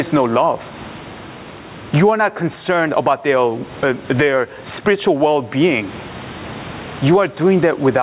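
Throughout the speech, the input gain is likely set far too high, so a fast limiter or compressor clamps down on every loud syllable and releases in the pauses. This gain pumping swings the level by around 20 dB, while the room noise sits about 34 dB below the speech. Loud and quiet passages sit squashed together, heard through a narrowband call path with nothing above 4 kHz.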